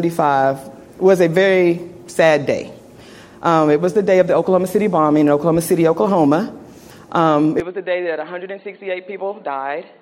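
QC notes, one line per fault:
7.60 s to end: input switched to a poorer device. With no gap, the sound turns dull, with nothing above 4.4 kHz. It drops by roughly 10 dB and gains a faint new noise floor. The likely cause is a change to a narrower-band input.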